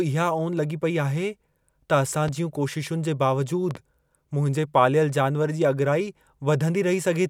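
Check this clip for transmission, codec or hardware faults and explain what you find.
Two loud pop events interrupt the speech, with no other fault present in the clip. A loud pop occurs at 2.28 to 2.30 s as a single sharp thump, and again at 3.71 to 3.78 s as two pops in quick succession, each peaking around 5 dB above the speech, which continues underneath. The likely cause is a sudden voltage step or pulse from a plug, switch, static discharge or driver glitch entering the signal chain, with the following circuits shaping that pulse into a brief thump.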